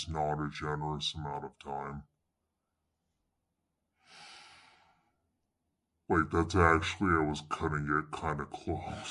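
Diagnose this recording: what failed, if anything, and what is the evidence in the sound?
The speech is slow and heavy from start to finish, every syllable drawn out and the whole voice dropped by about seven semitones (−7.02), with timing stretched to 0.667 of normal speed. Because pitch and tempo shift together by the same ratio, this is a wrong sample rate at the playback stage. The samples are clocked out without conversion, which fits 48 kHz material being played as though it were 32 kHz.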